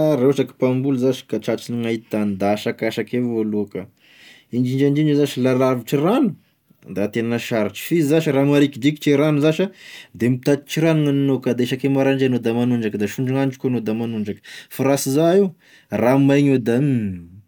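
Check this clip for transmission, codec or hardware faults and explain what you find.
No faults detected.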